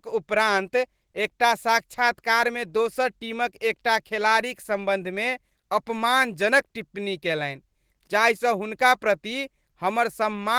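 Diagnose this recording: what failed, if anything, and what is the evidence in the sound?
Nothing failed: the sound gives no evidence of a fault at any stage of this recording.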